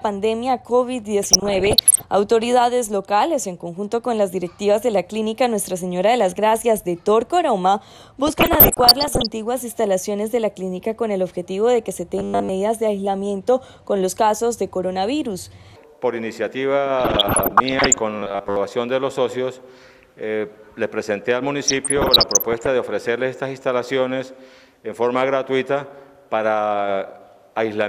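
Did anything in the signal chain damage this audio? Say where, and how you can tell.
Yes. At the codec/broadcast reception stage, DAB burbling appears from 1.23 to 2.02 s, 8.27 to 9.26 s, 16.98 to 17.94 s and 21.68 to 22.67 s. Residual bit errors, worst in the first burst, corrupt MP2 samples and scale factors so individual sub-bands jump in level frame by frame.

Between 12.18 and 12.50 s and again from 18.19 to 18.56 s the audio becomes a rigid metallic buzz at 100 Hz. This is robotic sound from repeated short buffers, likely at the driver or buffer stage. Starved playback loops a 10 ms chunk, replacing most of the real audio, and the loop rate imposes the fixed pitch.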